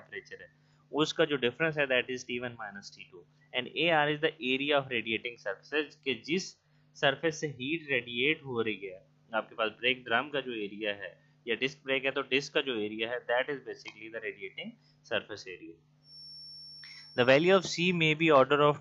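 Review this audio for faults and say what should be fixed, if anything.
From 15.99 to 18.01 s there's a feedback whistle: a thin, steady tone at 5.4 kHz sitting about 20 dB under the sound, wavering a little in level but never running away. It's likely a loudspeaker-to-microphone loop hovering right at the edge of feedback, so that one frequency keeps ringing. To prevent it, pull the mic gain or monitor level down a touch, or notch out 5.4 kHz on the monitor feed.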